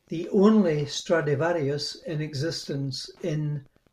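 A faint, steady ticking runs under the speech from start to finish, repeating about ten times a second and sitting roughly 35 dB below it. This is Wi-Fi interference: a nearby radio's beacon, sent every 102.4 ms, is picked up and rectified by the audio circuitry.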